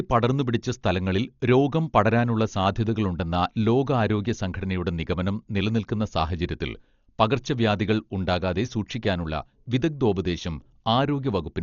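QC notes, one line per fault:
Throughout: Dolby Digital compression, dull speech with nothing above 6.9 kHz and rough fluttering noise around tones, likely from heavy coding at a low bitrate near 40 kbps.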